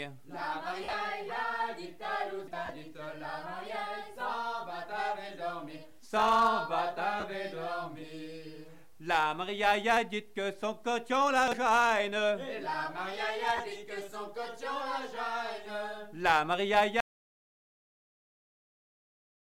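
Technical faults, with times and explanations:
0.84–0.93, 2.65–2.69, 7.20–7.24 and 13.57–13.60 s, lost LE Audio frames: short gaps of 67.5, 37.5, 37.5 and 22.5 ms where the LC3 decoder covered the holes by replaying the last spectrum with scrambled signs. Tones smear into a brief noisy blur. The first one is patchy, scattered over 90 ms with a longest run of about 50 ms.
17.01 s to the end, audio dropout to silence: the sound cuts off abruptly and stays silent, with no room tone at all. That points to the input vanishing, likely a dropped link or device, while the recorder kept writing empty samples, so everything after that moment is gone.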